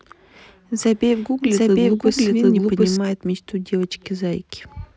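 From 0.85 to 2.97 s, a doubled audio track: a second, equally loud copy trails about 0.7 s behind, abrupt at both ends, likely from a duplicate capture path.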